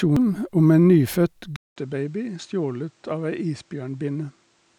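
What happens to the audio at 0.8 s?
Nothing goes wrong at 0.8 s; the audio is intact there.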